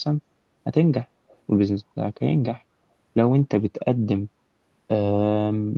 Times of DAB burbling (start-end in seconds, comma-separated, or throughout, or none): none